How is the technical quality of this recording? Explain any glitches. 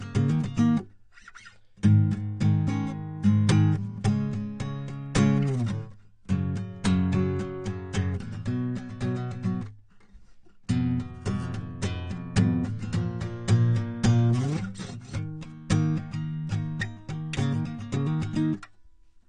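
The technical quality is poor, with audible AAC compression damage throughout the music. Nothing remains above about 9.8 kHz, and the sound is dull and smeared with a warbling, fizzy texture. This likely comes from AAC-LC coding at a low bitrate, consistent with roughly 32 kbps. That forces coarse quantisation and sparse bands. Unlike a simple low-pass filter, the damage goes beyond the missing top: the remaining spectrum also churns.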